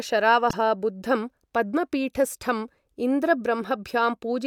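Corrupt frame decoded at 0.50 to 0.53 s in this speech clip, just before "बुद्धं पद्मपीठस्ठम्": damaged bits across about two frames were played anyway, misplacing energy into a brief noisy blip peaking around -10 dBFS.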